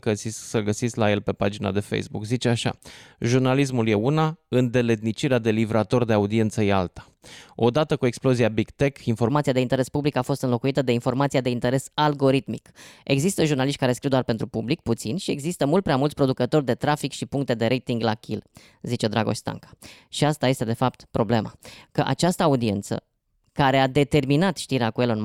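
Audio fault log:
9.30 to 25.25 s, section at the wrong speed: from this point to the end the speech turns hurried and higher, sped up 1.15 times and raised about two semitones, likely from this stretch being played against the wrong clock, so speed and pitch shift together.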